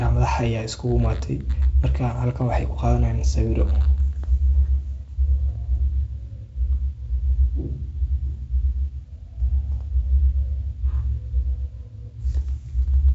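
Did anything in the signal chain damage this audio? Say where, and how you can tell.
No, nothing in the chain did any damage here; what you're hearing is the speech going through G.722 wideband telephone coding as intended, with the top end stopping at about 7.7 kHz and the light coding texture that fits the 48 kbit/s mode.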